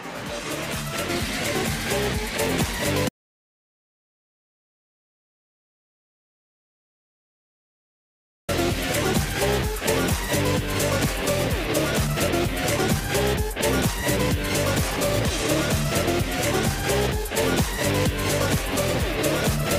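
At 3.09 s the sound cuts off abruptly and stays in silence until 8.49 s, an audio dropout to silence lasting about 5.4 s. The most likely cause is that the input was lost for a moment, through a disconnected device, a failed link or an accidental mute, while recording carried on writing silence. A noise gate or a fade would leave some background hiss or taper gradually. Here both edges are hard and no room tone remains, so whatever occurred during those seconds is gone.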